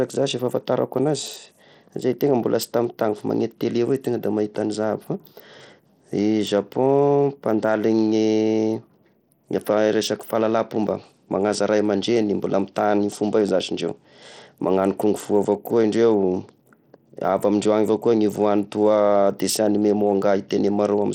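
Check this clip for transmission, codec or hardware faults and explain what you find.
One codec fault runs through the whole speech clip: Bluetooth SBC compression, most likely at a low bitrate around 80 kbps. The treble thins and flickers as sparse bits starve the upper sub-bands, while coarse quantisation leaves a plainly audible gritty haze and aliasing.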